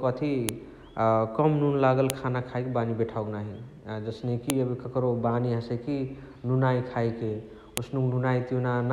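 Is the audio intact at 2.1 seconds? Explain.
No. At 2.1 s the speech is broken by a file header played as audio, a single sharp, loud click lasting about a millisecond. Two WAV segments appear to have been joined or streamed at that point without stripping the second segment's header, so its few dozen bytes of format data were decoded as sample values. That produces an abrupt spike unrelated to the surrounding speech, heard as a snap at the splice.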